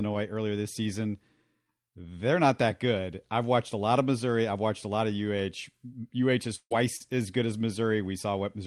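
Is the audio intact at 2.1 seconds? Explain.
Yes, the audio is intact at 2.1 seconds, with no dropout, click, distortion or other fault audible at that moment.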